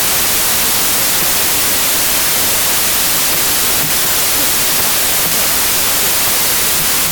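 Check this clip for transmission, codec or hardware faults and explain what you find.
One fault runs through the whole recording: a wrong sample width. The sound fits packed 24-bit data read back as 32-bit integers, so most values are assembled from bytes of neighbouring samples. Loud noise results, with the speech buried inside, running about 1.33 times too fast and correspondingly high in pitch.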